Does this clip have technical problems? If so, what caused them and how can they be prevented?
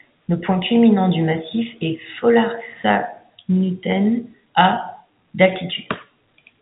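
No, the speech carries no technical fault; it has gone through G.711 telephone coding, consistent with A-law at 64 kbps, with nothing above about 3.8 kHz.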